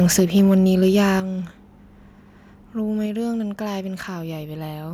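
Speech opens with microphone overload from 0.0 to 1.04 s: the loudest syllables carry a harsh, crackling edge where their peaks are flattened against the converter's ceiling. The input is running about 5 dB too hot, with roughly 3 percent of samples clipped, most likely because the microphone input volume was set too high. The level then drops abruptly twice, once by about 3 dB at 0.2 s and again by about 8 dB at 1.2 s. Voice and background fall together, the signature of the microphone volume being stepped down, likely by the call software reacting to the clipping.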